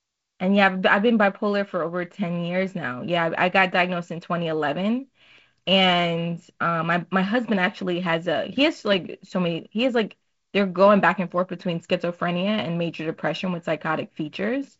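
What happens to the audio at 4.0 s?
At 4.0 s the speech carries on intact, with no fault at that moment; it is simply the G.722 wideband telephone coding at work, with nothing heard above about 7.7 kHz.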